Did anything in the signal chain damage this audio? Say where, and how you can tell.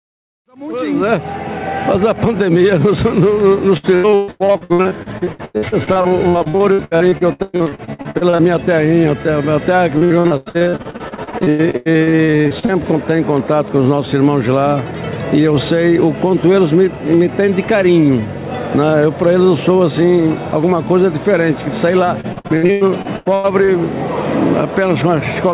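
Yes. The damage happened at the network stage, as repeated packet loss (robotic sound) from 3.77 to 8.42 s, 9.98 to 12.74 s, and 22.21 to 23.71 s. In each stretch, between about a third and a half of the time is made up of short holes, the longest between about 92 and 124 ms, that the jitter buffer patches by extending the previous sound. That gives the choppy, metallic texture. Packet loss leaves these concealed repeats. A dropout would leave plain silence, and codec coding noise would be steady. Here the 4 kHz ceiling of the G.711 call path stays constant throughout.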